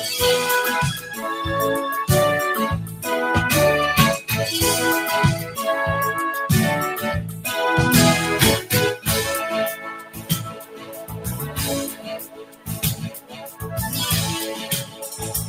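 A noise suppressor built for speech has been left running on this sound, and it treats held tones, ambience and reverb as noise, so level swings by roughly 15 dB as sustained parts sink and onsets pass. That link to steadiness rather than loudness separates it from a compressor or gate. The sound is cut by the noise suppressor at 0.94–1.24 s (about 8 dB), 9.75–11.58 s (about 14 dB), 11.87–12.76 s (about 15 dB), 12.95–13.66 s (about 14 dB) and from 14.5 s to the end (about 12 dB). In these stretches the decays die early and thin out instead of fading naturally.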